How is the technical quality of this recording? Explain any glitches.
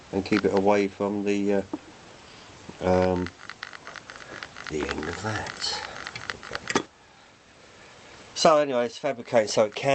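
No glitches or faults heard.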